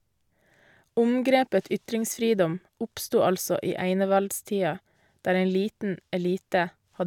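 No technical faults can be heard at any point in the recording.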